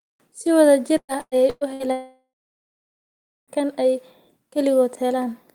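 A speech recording with two packet-related faults close together. Repeated packet loss (robotic sound) runs from 0.97 to 1.83 s. Four separate holes open in that stretch, the longest about 114 ms. Each is patched by stretching out the sound just before it, so nearly half of this span is synthetic fill. The speech turns choppy, with pieces missing. A long dropout follows from 1.92 to 3.51 s, likely caused by a network outage. About 1.56 s of speech never arrives. The receiver continues the last sound briefly, then about 1.2 s of silence remains. The audio resumes at "kan ay", with the lost portion gone for good.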